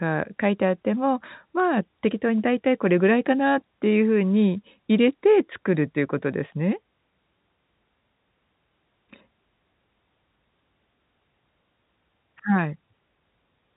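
No technical faults are present.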